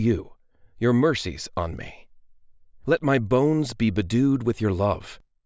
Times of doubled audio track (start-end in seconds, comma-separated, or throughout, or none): none